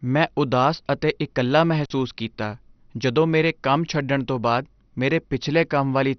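A speech recording that sounds dull, gurgling and granular throughout, with nothing above about 6.1 kHz, likely from heavy MP2 compression at a low bitrate around 48 kbps; a spectrogram shows flickering upper sub-bands cut flat. After "ਮੈਂ ਉਦਾਸ ਅਤੇ ਇਕੱਲਾ", an intermittent contact drops the sound from 1.84 to 1.92 s, opening for about 48 ms before "ਕੀਤਾ ਜਦੋਂ ਮੇਰੇ ਕੰਮ"; the waveform shows a near-flat gap with crackle spikes at its edges.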